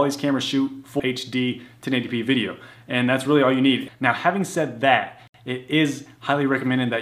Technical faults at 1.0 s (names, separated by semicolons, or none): CD skip